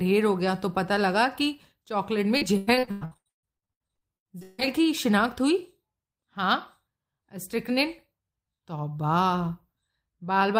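From 2.37 to 4.63 s, repeated packet loss leaves many short gaps, up to 155 ms, patched by extending prior sound, so roughly half the stretch sounds choppy and robotic.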